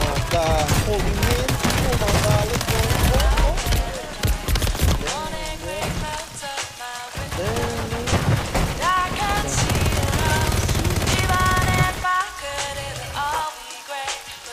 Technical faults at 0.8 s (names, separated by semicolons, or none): none